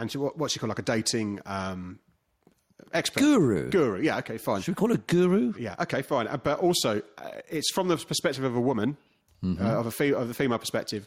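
Gain pumping throughout the audio: likely excessive input gain driving a fast limiter, so the level swings about 5 dB under loud sounds.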